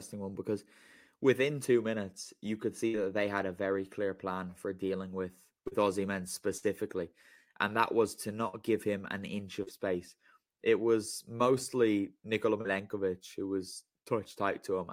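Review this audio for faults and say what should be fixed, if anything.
Two bursts of packet loss, at 2.87–2.96 s (between "two minutes you could" and "that they had a") and 6.57–6.64 s, left the receiver with no audio for about 60 ms each time. It extended the last sound while fading it, which produces a held buzz or dying hiss, and then jumped ahead with that stretch gone. A larger jitter buffer, or forward error correction on the link, would recover lost runs like these.

Short concealed packet loss occurs at 5.68–5.73 s, 8.48–8.55 s (between "and that was to" and "give him an inch"), 9.63–9.69 s (just after "give him an inch"), 11.37–11.41 s and 12.61–12.66 s. In each case 20 to 40 ms arrived too late to decode, and the receiver patched the hole from the preceding sound. This is heard as a brief smear or wobble, and a quick consonant may drop out. Steadier network delivery, or redundant packet coding, would stop these small gaps from reaching the listener.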